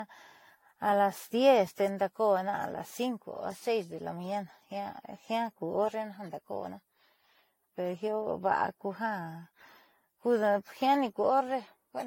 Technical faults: generation loss

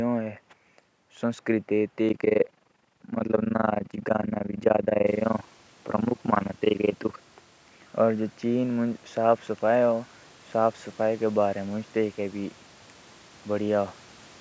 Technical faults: overlap-add ripple

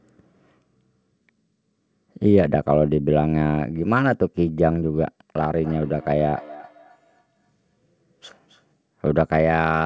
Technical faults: feedback echo between two devices

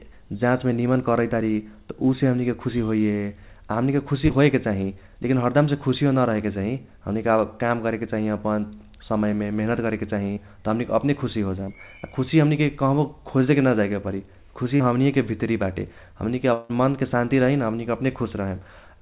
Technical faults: short concealed packet loss; long network dropout

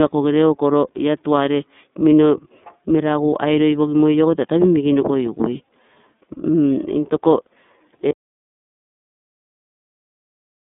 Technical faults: iLBC codec; audio dropout to silence

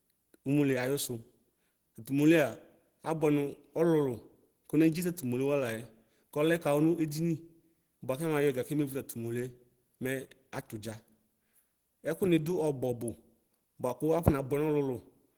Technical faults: Opus compression

